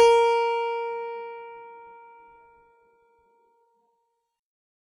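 A music clip with heavy codec damage throughout. Treble sounds gritty and metallic, with nothing above 11.2 kHz. This is likely HE-AAC compression at about 16 kbps.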